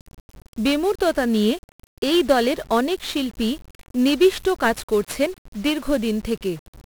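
Speech, degraded throughout by 1-bit DFPWM compression, and heavily so. Each sample carries a single bit nudging an adaptive level up or down, which fits a stream of about 48 kbps. The result is dense broadband quantisation noise: a fuzzy, crackling texture with the treble swamped by hiss.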